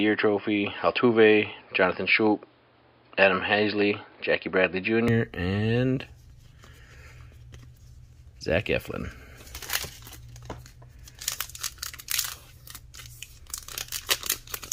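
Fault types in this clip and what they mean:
Input switched to a poorer device: the sound is dull and boxy from the start until 5.08 s, then abruptly opens up, likely because the recording began on a narrower-band microphone or headset profile before the input changed. On a spectrogram, energy stops flat at 5.1 kHz for those first 5.08 s, with a faint extra noise floor well below the signal. The waveform shows no gap and no obvious level jump at the switch.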